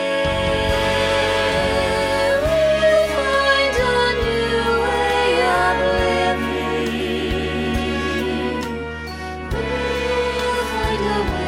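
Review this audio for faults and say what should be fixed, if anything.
Nothing stood out on listening, so there is nothing here that needs fixing.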